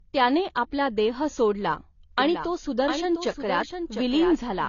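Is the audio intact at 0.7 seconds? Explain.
No. At 0.7 seconds, as across the whole clip, the speech carries the signs of low-bitrate audio saved at a high bitrate. Nothing is present above about 6.9 kHz, so the sound is dull and muffled, and the artefacts of the first encode remain. This likely comes from an earlier very low-bitrate encode, one that fits AAC at around 24 kbit/s. Re-saving it as a generous MP3 could not restore the discarded detail.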